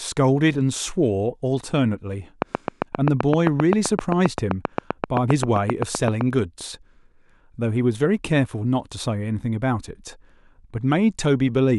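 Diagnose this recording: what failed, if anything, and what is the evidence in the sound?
A train of clicks runs from 2.42 to 6.22 s: about 30 near-identical pops at a regular 7.65 per second, standing well above the speech level. The steady pace points to a periodic pulse coupling into the analogue wiring, likely interference from nearby equipment.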